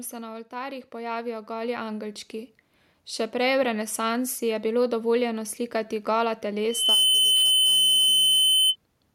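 A speech recording with two faults. Just after "se na", from 0.49 to 2.25 s, automatic gain rising lifts voice and background together by about 9 dB, which shows on the waveform as a steadily widening envelope. After "bilo dovoljeno slikati gola", a loudspeaker feedback squeal at 3 kHz swells within a fraction of a second and holds from 6.69 to 8.76 s, a little louder than the speech. It appears on the spectrogram as a bright, narrow horizontal line, caused by the microphone picking up and re-amplifying its own loudspeaker output.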